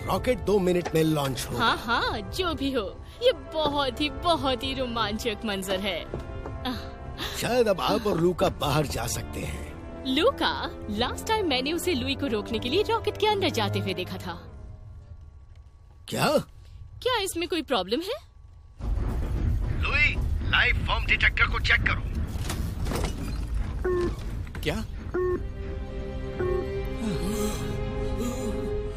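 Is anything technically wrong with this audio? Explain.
No, nothing technically wrong turns up here, and the audio runs along without any faults to point to.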